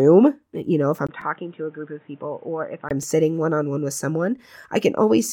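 At 1.07 s the sound turns dull and boxy after a gap of about 20 ms. Nothing above 3.8 kHz remains. The level falls by roughly 10 dB, and a new noise floor sits about 30 dB down. The likely cause is an input switched to a poorer device. Full clarity returns at 2.91 s.

At 1.21 s comes a repeated buffer. A 2.9 ms slice plays three times with hard joins. That fits a 128-sample buffer. It sounds like a tiny click or buzz, and a few milliseconds of sound are lost. A second repeat at 3.03 s plays once extra and gives a click.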